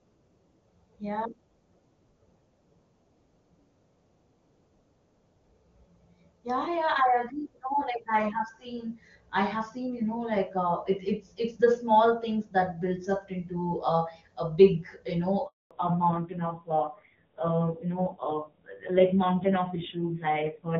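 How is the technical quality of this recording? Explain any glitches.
The call starts as clear HD Voice speech, which fits AMR-WB at a high rate such as 23.85 kbit/s, but two linked faults appear near the end.

At 15.47 s there is a handover gap: the call switches networks, no speech frames arrive for 240 ms, and the audio drops to silence until 15.71 s.

From 15.71 s to the end, the call falls back to narrowband. Nothing above 4 kHz remains, and the speech sounds duller and rougher, which fits a low-rate AMR-NB mode around 5.9 kbit/s.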